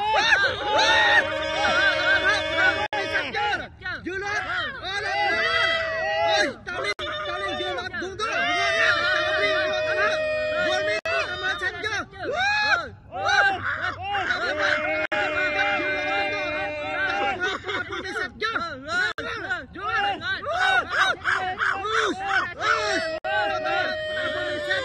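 The audio has a gap at a join of encoded pieces roughly every 4 seconds, at 2.86, 6.93, 10.99, 15.06, 19.12 and 23.18 s. Each is a dropout of about 64 ms before the sound resumes where it stopped, which is what you get when separately encoded chunks keep their start delay and end padding.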